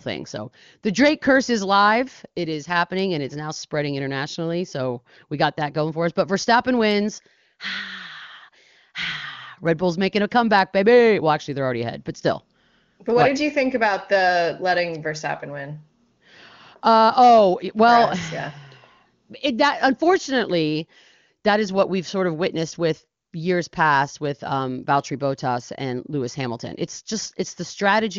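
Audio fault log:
No faults to log; nothing in this speech stands out.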